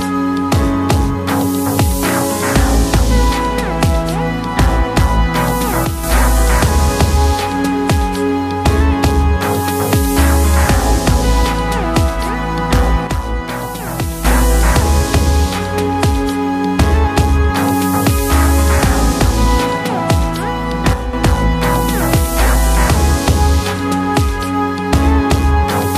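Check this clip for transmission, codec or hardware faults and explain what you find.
Three brief level dips point to one fault. At 5.85 to 6.04 s, 13.07 to 14.25 s and 20.93 to 21.13 s the sound abruptly drops by about 6 dB, then recovers. The likely cause is one channel drops out, halving the mono sum while it is missing.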